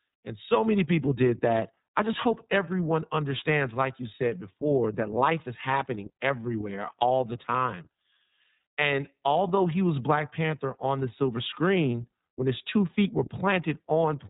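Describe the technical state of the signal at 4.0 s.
At 4.0 s the speech carries iLBC codec damage, as it does for the whole clip. The band stops at 4 kHz, so the sound is narrowband and muffled. The codec codes each 30 ms frame's excitation on its own. That gives a plainly audible rough, slightly synthetic texture. The degree of damage fits the lower iLBC rate of about 13.3 kbps.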